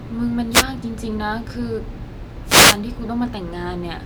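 At 0.51 s a wireless microphone noise hit breaks in for about 0.14 s, then again from 2.44 to 2.79 s, a longer burst of about 0.35 s. Both are short swishes of static over the speech as the FM radio link fades and receiver hiss swells, unlike a steady hum or a single digital dropout click.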